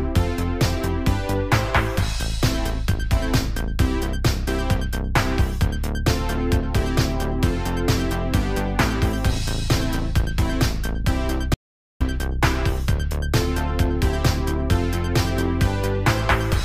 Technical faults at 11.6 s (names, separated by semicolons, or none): audio dropout to silence